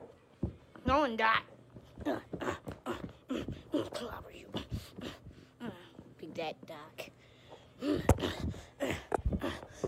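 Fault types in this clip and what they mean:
Nothing stood out on listening to this audio.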